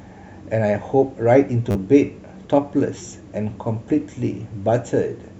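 A repeated buffer at 1.71 s and again at 2.98 s: late audio left the device replaying one short piece, which fits a 10 ms buffer. It plays four extra times at 1.71 s, dropping about 40 ms, and twice at 2.98 s, dropping about 20 ms. Each is heard as a brief buzzy stutter, and the waveform shows identical back-to-back segments with hard joins.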